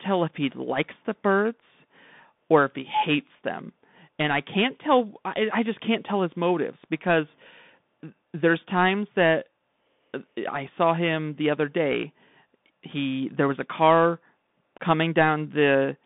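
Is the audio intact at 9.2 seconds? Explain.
No. At 9.2 s you're still hearing the Bluetooth CVSD headset codec, which runs through the whole clip. It's the narrowband headset path, sending one bit per sample to say up or down while the step size adapts, which fits a 64 kbps stream. The speech sits in roughly a 150 Hz to 3.6 kHz band with nothing above 3.8 kHz, so it sounds boxy. Loud high parts outrun the step and distort, s sounds turn scratchy, and a grainy hiss sits underneath.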